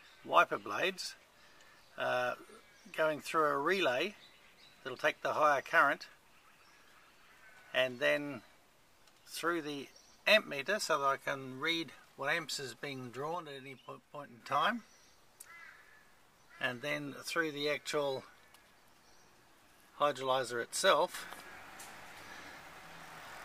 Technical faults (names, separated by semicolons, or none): sudden gain jump